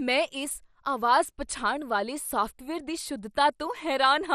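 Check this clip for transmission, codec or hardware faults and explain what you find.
One codec fault runs through the whole clip. The speech has the dull, gurgling graininess of MP2 compression, which fits a rate near 64 kbps. The cause is likely an encoder that splits the signal into sub-bands and, short of bits, quantises the surviving bands coarsely while switching upper ones off, so nothing remains above 14.9 kHz. A spectrogram shows a hard ceiling there, with flickering, blocky patches of energy below it.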